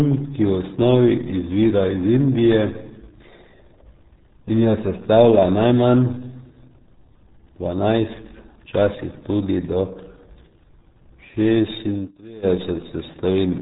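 Muffled, gargly speech with nothing above 3.8 kHz runs throughout: heavy RealAudio 14.4 codec damage, consistent with squeezing the signal into about 8 kbit/s.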